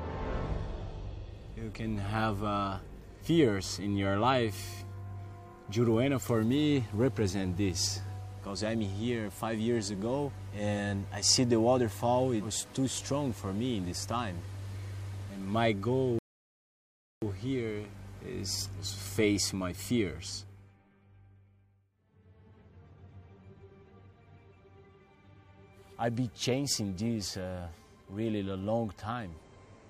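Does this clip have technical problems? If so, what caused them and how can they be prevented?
Yes. A rebuffering stall runs from 16.19 s to 17.22 s. The player used up the audio it had already downloaded, so playback halted and the sound dropped to silence for about 1.03 s. Once enough new data arrived, the audio picked up at exactly the point where it had stopped. Nothing was skipped, but just over a second of extra time was inserted. Buffering more audio before playback starts, or lowering the stream's bitrate, prevents this.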